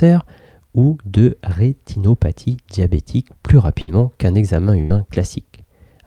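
At 3.81 s there is a burst of packet loss lasting to 3.89 s. Several packets never arrived in time. The receiver stretched the last sound over about 58 ms and faded it out. It turns into a brief held buzz or hiss. About 60 ms of audio is skipped. A second burst runs from 4.81 to 4.92 s. Here the concealed stretch is about 87 ms, and roughly 80 ms of sound is lost before playback resumes.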